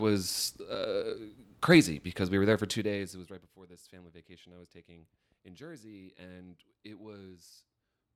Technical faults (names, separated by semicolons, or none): none